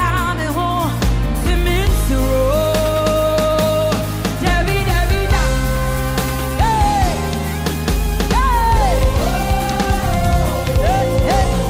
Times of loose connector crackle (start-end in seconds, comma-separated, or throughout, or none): none